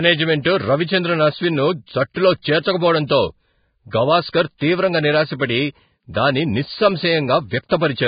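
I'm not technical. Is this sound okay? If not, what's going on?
No, the speech has two problems.

The first is heavy Vorbis compression. The whole recording sounds hissy and grainy. Nothing above about 4.9 kHz remains, so it sounds dull and muffled. The likely cause is saving it far too small. To save space, the format discards the fine detail in the upper tones. It puts rough noise of similar strength in its place. That makes the speech sound rough.

The second is pre-echo. Just before a sharp sound starts, there is a brief hiss. This happens at 2.14 s, from 4.30 to 4.34 s, and from 7.69 to 7.71 s. The format handles sound in short blocks. It spreads its noise across a whole block. When a loud start comes late in a block, the quiet moment before it also fills with that noise. The start then sounds soft or smeared.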